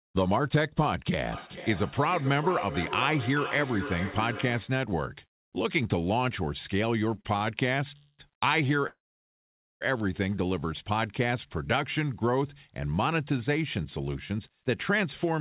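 From 1.32 to 4.84 s, a feedback echo between two devices: a second device's speaker fed back into the microphone, outside that device's echo canceller. The sound returns roughly every 0.4 s, at most about 9 dB below the direct sound, thinner and ringing.

At 7.21 and 7.37 s, two short stalls from a late packet occur: the jitter buffer ran dry, and the last sound was stretched by 35 ms and then 40 ms before continuing, leaving brief held tones.

Two call audio freezes follow, from 7.97 to 8.21 s and from 8.87 to 9.83 s, likely from packets held up in the network. The last sound is drawn out into a fading buzz, then silence for about 60 ms and about 860 ms. Playback resumes where it stopped, with nothing lost.

From 14.00 to 15.39 s, a jitter buffer speed-up trims surplus buffered audio: short pitch-period slices totalling roughly a tenth of a second are removed, so the sound runs about 6% fast at unchanged pitch and feels hurried. 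Throughout, the call path's band limit leaves nothing above 4 kHz, which fits a G.711 codec.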